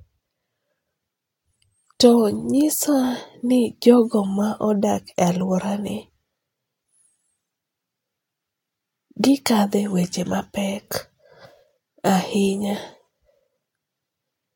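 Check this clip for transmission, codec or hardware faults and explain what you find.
Nothing in this speech clip points to a transmission, codec or hardware fault.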